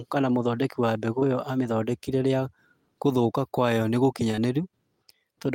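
Short concealed packet loss at 1.19–1.23 s after "kana mũthondeki wa mbegũ", then at 4.31–4.35 s and 4.35–4.39 s after "gũthũka kwayo": each time about 20 ms went missing and was patched by extending the preceding sound, heard as a brief smear rather than a silent dropout.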